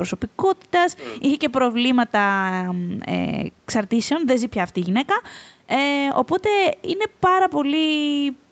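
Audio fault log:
No faults heard anywhere in this speech.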